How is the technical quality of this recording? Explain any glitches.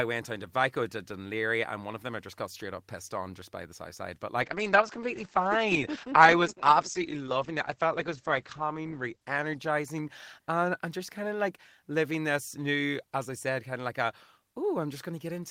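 One real problem here: a call bitrate drop running from about 4.42 s to 10.29 s. The connection's bandwidth estimate collapsed, so the encoder got squeezed from 32 kbps down to 9 kbps and sat at the bottom for about 4.3 s. With so few bits it codes the speech far more coarsely and chops the top end, pulling the audio band from 20 kHz down to 8 kHz. You hear it go muffled and rough and watery until the rate climbs back.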